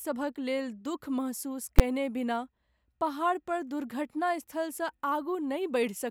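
At 1.79 s there's a single loud bang, just before "बिना पहाड़ पर". That's invalid numbers at full scale: a calculation blew up into infinite or invalid values, which got pinned to maximum level for one short block, about 11 ms, which fits a 512-sample buffer.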